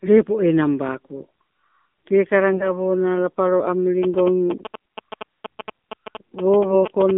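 Throughout, the speech carries AMR narrowband mobile codec coding. The line passes only about 200 Hz to 3.7 kHz, and the vocal-tract model driven by sparse pulses gives a plainly buzzy, synthetic quality, which fits a low AMR-NB mode around 7.4 kbps.

From 2.53 to 2.72 s, and again from 6.60 to 6.85 s, AMR bit errors corrupt the less-protected frame bits at a rate of a few percent. Each span points to roughly nine 20 ms frames. Misplaced excitation pulses and wrong gain and spectral values make the voice hoarse, scratchy and gargly while it keeps its pitch and level.

From 4.03 to 7.11 s, GSM signalling bursts from a nearby 2G phone are rectified by the audio circuit. They sit around 10 dB below the speech and are heard as a galloping dit-dit-dit of short buzzes at 217 Hz.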